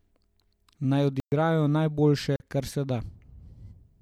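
Speech with two blocks of digital silence, from 1.20 to 1.32 s (120 ms) and from 2.36 to 2.40 s (40 ms). Each drops to silence and returns with no fade. That abrupt cut, rather than a faded dropout, points to an output buffer not filled in time.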